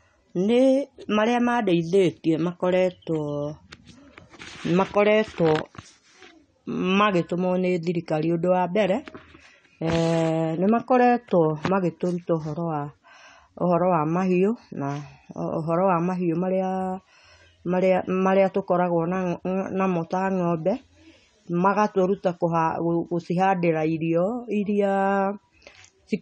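A speech clip with AAC compression damage from start to finish. Nothing is heard above 9 kHz, so the top end is cut away and the sound is dull. The codec artefacts are plainly audible throughout. The likely cause is AAC-LC coding at a low bitrate, which fits about 32 kbps. At that rate the encoder lowers its cut-off and quantises the remaining bands coarsely against its hearing model, smearing the detail.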